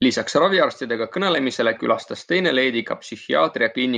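No technical faults can be heard anywhere in this speech recording.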